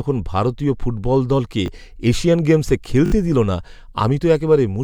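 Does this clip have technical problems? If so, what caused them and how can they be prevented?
Yes. A repeated buffer stutters at 1.66–1.68 s, after "ভারতীয় ফুটবল দলকে", and at 3.06–3.12 s, before "দিলো না". It fits a 20 ms buffer replayed once, then three times, because new audio arrived late. Larger buffers or higher playback-thread priority would prevent it.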